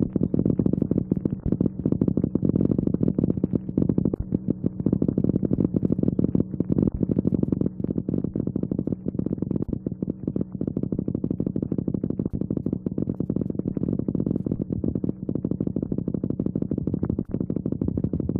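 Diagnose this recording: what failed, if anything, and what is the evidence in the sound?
Damaged data in a compressed stream, at 9.70 s and 14.55 s: each is a brief glitch lasting under 20 ms, sitting at the codec stage. A stretch of the encoded file or stream was corrupted, so the decoder misread or rejected the frames there, lost sync and had to hunt for the next valid frame header before resuming normal output. The two separate blips point to two distinct spots of bad data rather than a continuous fault.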